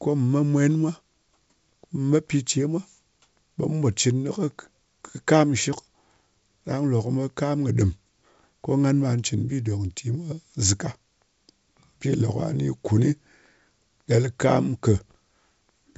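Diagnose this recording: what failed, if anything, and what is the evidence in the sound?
Nothing failed; the sound of this recording gives no evidence of any fault.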